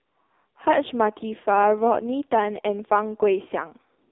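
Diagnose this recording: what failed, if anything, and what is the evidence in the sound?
Codec stage: heavy AMR narrowband mobile codec damage throughout. Nothing above 3.6 kHz survives, and the buzzy, synthetic texture from its sparse pulse-driven vocal-tract model points to a low mode near 5.9 kbps.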